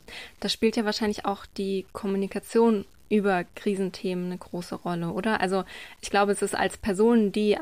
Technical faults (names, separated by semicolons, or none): low bit depth without dither